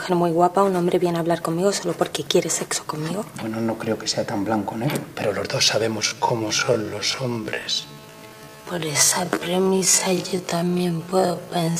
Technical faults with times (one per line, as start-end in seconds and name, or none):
5.97-11.80 time-stretched section